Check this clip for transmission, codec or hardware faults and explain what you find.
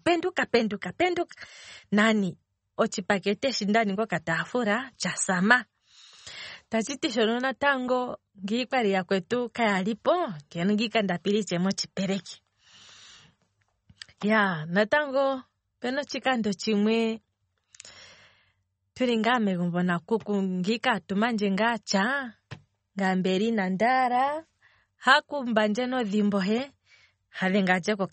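There's one problem running through the whole speech clip. Everything's cut off above 8.4 kHz, and there's plainly audible swirly, watery smearing, likely MP3 compression at a low bitrate, something like 32 kbps.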